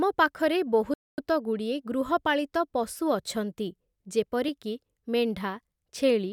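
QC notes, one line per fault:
0.94–1.18 s, playback stall: the speech cuts off abruptly in mid-flow and the output drops to silence for about 240 ms, then picks up again. The gap is long enough to register as a hitch, a held breath in the middle of the sentence. The likely cause is the player running short of data, or its playback thread being held up, so nothing reached the output until it recovered and resumed.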